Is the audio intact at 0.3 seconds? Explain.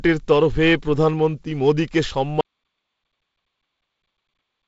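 Yes, the audio is intact at 0.3 seconds: no fault occurs there, and the speech carries the light hiss, the slightly noisier lower band and the 7.7 kHz top end of the G.722 wideband telephone coding.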